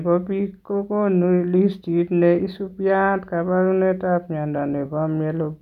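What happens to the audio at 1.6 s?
At 1.6 s the speech continues without any audible fault; the audio is intact at that moment.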